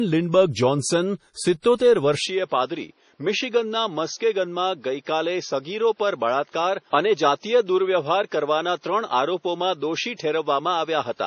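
Throughout, the speech has heavy codec damage: watery, swirling treble and nothing above 10.5 kHz. This likely comes from MP3 compression at a low bitrate, around 32 kbps.

From 1.77 to 1.80 s, a pre-echo hiss spreads about 31 ms ahead of an attack. The block's quantisation noise leaks into the quiet moment before it, softening the onset.

At 2.25 s, the sound turns duller and drops about 5 dB, with no gap. Nothing passes above 6.5 kHz, and new background noise sits well below the speech. This continues to the end. It is likely an input switched to a poorer device.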